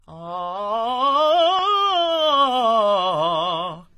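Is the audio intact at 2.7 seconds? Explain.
No. At 2.7 seconds the music is still carrying the transcoding between lossy codecs damage that runs through the whole clip. It likely went through a low-rate HE-AAC encode and then a second AAC-LC pass, which spent its bits re-coding the first codec's artefacts while adding its own. You hear both layers at once, and the top end stops dead at about 14.9 kHz.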